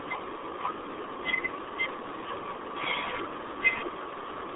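From start to finish, the speech carries RealAudio 14.4 codec damage. Nothing passes above about 3.8 kHz, and the band sits near 300 Hz to 3.6 kHz. The damage is heavy, which fits an 8 kbit/s dial-up codec. Speech sounds muffled and gargly.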